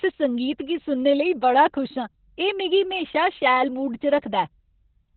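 Opus voice compression runs through the whole speech clip. Nothing survives above about 4.2 kHz, the narrowband of the SILK coder at what sounds like roughly 8 kbps. Unlike a simple low-pass filter, the coarse excitation also makes the voice hoarse and faintly robotic.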